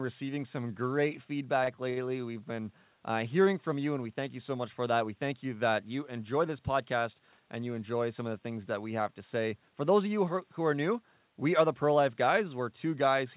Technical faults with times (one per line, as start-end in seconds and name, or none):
1.64-1.98 short stall from a late packet